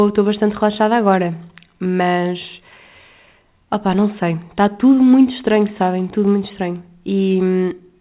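No faults found: the speech comes over a call path with nothing above 4 kHz, consistent with G.711 mu-law at 64 kbps, and no dropouts, glitches or level problems at any point.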